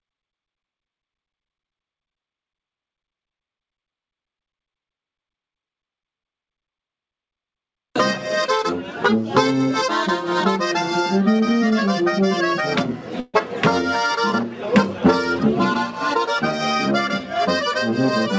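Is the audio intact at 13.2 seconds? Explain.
No. From 13.20 to 13.36 s there is a call audio freeze: the last sound is stretched into a fading buzz for 137 ms, likely because packets stalled and the jitter buffer ran empty. Unlike a dropout, there is no silence and nothing is lost. The audio resumes where it stopped, only later.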